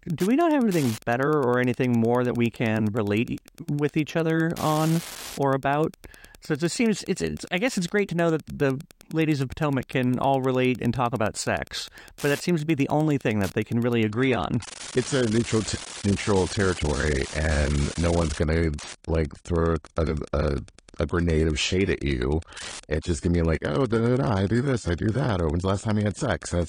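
From the start, Wi-Fi interference ticks steadily every 102.4 ms, roughly 20 dB below the speech; unlike mains hum, it is a rhythmic click, not a tone. At 14.08 s, after "that they can really", the adaptive stream switches abruptly to a lower bitrate, with nothing above 10.2 kHz; unlike a dropout, there is no gap, only sudden dullness.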